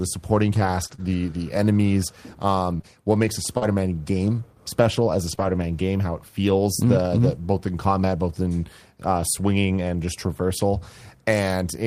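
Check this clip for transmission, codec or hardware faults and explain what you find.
The speech carries one transmission fault: scattered short gaps between 0.55 and 7.33 s, ending just before "both in combat both". About seven small packet losses, the longest around 40 ms and together roughly 150 ms, about 2% of that stretch, were concealed by the receiver stretching the preceding sound across each hole. They surface as brief ticks, smears and hiccups in otherwise clear speech. Unlike a single long dropout, no stretch goes silent or warbles for long.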